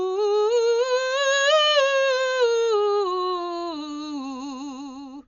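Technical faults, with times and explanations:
Throughout, likely Dolby Digital compression: nothing above 6.9 kHz, fitting a 48 kbps stream, plus rough dither-noise flutter around tones, which a plain low-pass wouldn't add.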